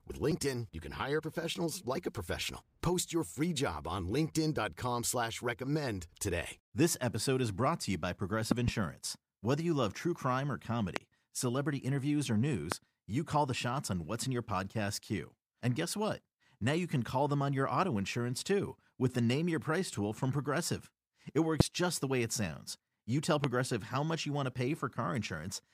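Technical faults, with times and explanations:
8.52–8.70 s, 10.96–10.99 s, 12.72–12.74 s, 21.60–21.63 s, 23.44–23.47 s: loud pop. These are sharp transients about 20 to 25 dB above the speech, which continues beneath them. They are likely voltage spikes from a plug, switch or static. The first, after "brought to you by", is a double pop. The pop after "love true crime or" runs straight into "celebrity interviews or". Dropouts would interrupt the speech rather than sit on top of it.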